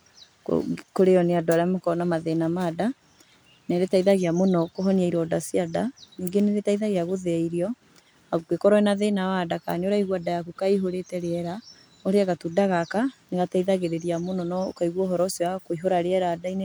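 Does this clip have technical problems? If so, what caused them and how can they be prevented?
No, there are no technical faults to report in this speech recording, so nothing needs preventing.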